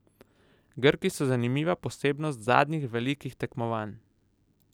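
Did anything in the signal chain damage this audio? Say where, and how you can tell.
No, nothing in the signal chain audibly damaged this speech recording. I hear no stage, from capture through to playback, leaving its mark on the sound.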